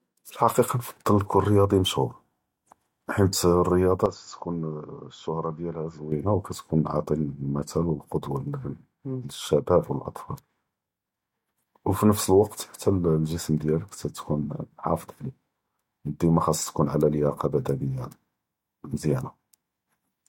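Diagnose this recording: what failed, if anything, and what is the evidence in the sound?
From 4.06 to 6.12 s the speech dulls and falls about 10 dB. Nothing passes above 7.3 kHz, and a new noise floor sits roughly 40 dB down. Neither change leaves a gap. At the driver stage, the input likely switched to a poorer device and back.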